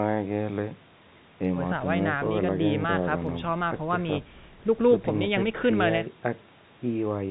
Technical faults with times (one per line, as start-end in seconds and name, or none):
none